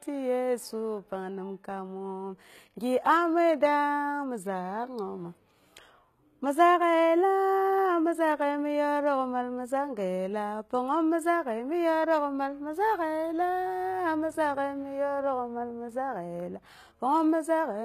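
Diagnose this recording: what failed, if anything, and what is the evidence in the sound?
The codec stage failed: the speech was likely squeezed through HE-AAC compression at a very low rate, consistent with roughly 20 kbps. Only the lower spectrum is truly coded, and the treble is synthesised by copying lower bands upward under a coarse envelope. Throughout the recording the top sounds false, with nothing above 14.9 kHz. Sibilants come out gritty and lispy, and the harmonics of the rebuilt upper band fail to line up with the real ones beneath the crossover.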